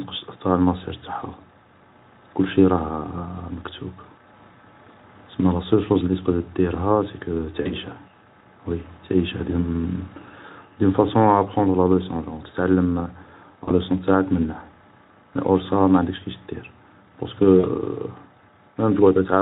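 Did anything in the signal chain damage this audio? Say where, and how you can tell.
Yes, at the network stage. VoIP packet loss concealed by the speech codec shows up at 7.61–7.73 s, 13.63–13.72 s just before "لوصون تاعك منه", and 17.59–17.66 s. About 40 ms drops out each time, and the Speex decoder stretches the last pitch and filter into a fading buzz or coloured noise.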